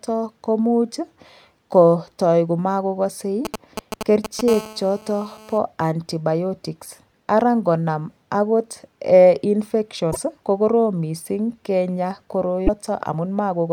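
From 3.45 to 4.49 s, a 2G phone close to the recording chain is exchanging short signalling transmissions with its network, and the audio circuitry rectifies those radio pulses. These GSM signalling bursts come through as a galloping dit-dit-dit of brief 217 Hz buzzes, loud enough to sit just under the speech.

At 4.49 s the phone moves into a call and transmits continuously at 217 bursts per second until 5.58 s. This GSM phone buzz is a hard, raspy tone at 217 Hz, rich in harmonics and unrelated to the speech, at about 16 dB below it.

Later, sections of the compressed stream arrive corrupted. The decoder cannot read those frames and loses sync while it hunts for the next valid header. This damaged data gives a short chirp or squawk from 10.09 to 10.17 s and again from 12.64 to 12.69 s.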